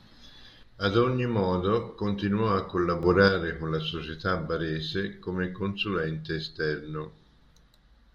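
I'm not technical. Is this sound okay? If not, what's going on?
No. The speech abruptly gets quieter from 0.63 to 3.03 seconds, briefly returns to full level, then drops again from 3.28 seconds to the end. This is likely one channel drops out: one side of a stereo recording cut off. The switch is instant, not a gradual fade.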